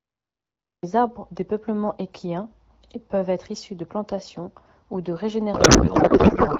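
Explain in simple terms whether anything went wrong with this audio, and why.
Cut-off start, from 0.00 to 0.83 s: the clip opens in dead digital silence and then jumps straight into speech already under way, at "arbres des peuplements équiens". No breath or gentle rise comes first, so the recording or stream must have begun a moment late, catching the sentence partway through. The abrupt switch from nothing to full sound is why the opening feels chopped rather than natural.

Codec payload misread, from 5.53 s to the end at about 6.6 s: right after "de plantation ou de", the speech turns into garbled noise and warbling that barely follows it. The sound was carried by the AMR wideband (HD Voice) codec, which is clear up to this point. The sudden garbling suggests the receiving end unpacked the compressed data using the wrong layout, most likely reading byte-aligned data as if it were compactly packed, so every piece landed in the wrong place.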